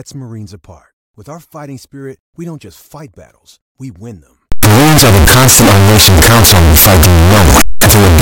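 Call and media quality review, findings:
Signed and unsigned mixed up, 4.52 s to end of clip, right after "battles we win them". Likely cause: 16-bit samples read with the wrong sign convention, top bit flipped. Each zero crossing jumps full scale. Sound turns to very loud, harsh distortion; quiet stretches blast as loud as everything else.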